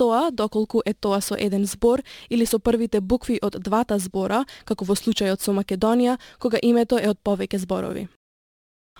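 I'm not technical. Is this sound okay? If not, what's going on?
No. Crude rate conversion runs through the whole clip, from start to finish. The speech was converted from one sample rate to another, which sounds like a move from 48 kHz to 44.1 kHz, by simply skipping samples at regular intervals instead of smoothing the change properly. Those small skips repeat in a fixed pattern and add shifted, out-of-tune copies of the speech, heard as a gritty, fizzy buzz that rides along with louder and brighter sounds.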